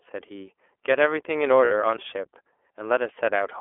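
Speech clip carried through the iLBC codec from start to end, with the band limited to roughly 300 Hz to 3.4 kHz. The codec damage is plainly audible: a rough, slightly synthetic texture that fits iLBC's 30 ms frame mode at about 13.33 kbps, where each frame's excitation is coded independently. From 1.65 to 1.72 s there are lost iLBC frames, a 60 ms gap consistent with two missing 30 ms packets. The decoder fills it by repeating the last pitch cycle mixed with noise, so it sounds like a held, faintly buzzy vowel before clean speech resumes almost immediately. At 1.97 s a CD skip produces a brief mute, around 15 ms, after which playback continues from a different point. This fits the laser jumping to another turn of the disc's spiral.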